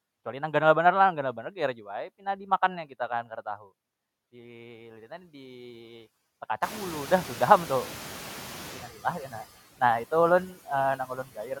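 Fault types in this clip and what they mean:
Noise suppressor catching up: Around six and a half seconds the room noise jumps by about 22 dB, and the suppressor's estimate of the background has not yet caught up with the new level. From 6.62 to 8.89 s the louder noise leaks through with too little reduction, then gradually sinks by about 9 dB over roughly 2.3 s as the estimate adapts. Unlike speech being cut, it is the background that changes here while the speech stays intact.
Speech cut by the noise suppressor: Between 10.97 and 11.57 s the suppressor mistakes parts of the speech for background and pulls them down along with the noise, by as much as about 12 dB. Only about a fifth of a second in total is affected, so the result is a few swallowed soft sounds or faint word endings rather than a steady change. Unlike the catching-up fault, the speech itself is damaged, not the noise level.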